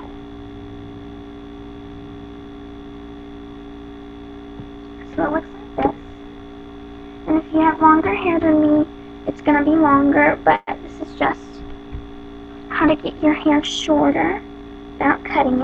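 A call audio freeze at 10.55 to 10.70 s inserts about 120 ms of fading continuation with a brief silence, likely from delayed packets draining the jitter buffer. A jitter buffer speed-up from 13.84 to 15.18 s plays the sound 8% fast at unchanged pitch, trimming about a tenth of a second of accumulated delay.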